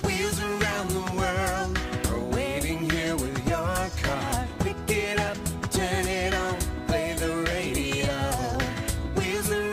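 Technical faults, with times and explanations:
4.55 s and 8.55 s, overlap between stream segments: two adjacent segments claimed the same few milliseconds, and the player trimmed about 3 ms of real sound, leaving a tiny skip. The waveform shows an abrupt step and the spectrogram a thin vertical broadband line, both on 2-second segment boundaries.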